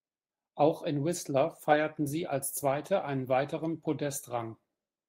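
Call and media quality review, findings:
No faults found: the speech signal stays continuous and stable across the whole clip, with no audible transport, capture or processing problems to log.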